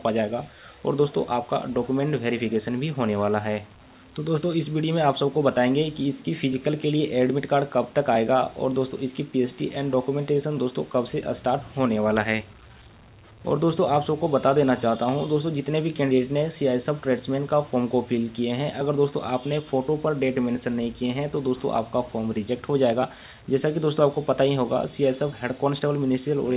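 Nothing goes wrong here; the sound arrives through the call path as expected, with nothing above about 4 kHz, which fits the narrowband telephone-style coding of a 64 kbps G.711 A-law link.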